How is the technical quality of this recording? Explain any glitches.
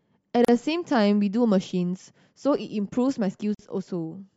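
The speech has two brief silent gaps at joins of encoded pieces, at 0.45 to 0.48 s (37 ms) and 3.55 to 3.59 s (47 ms). Separately encoded segments were spliced with their start-up delay and end padding left in, so the sound stops abruptly, smeared at the edges, and resumes exactly where it left off. Unlike a packet-loss dropout, nothing is missing.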